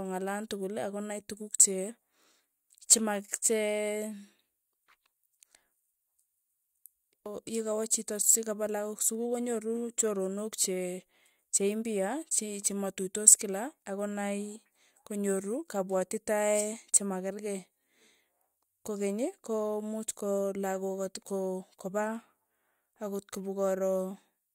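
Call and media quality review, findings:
Nothing to flag on this speech recording; I listened all the way through and heard no problems worth a ticket.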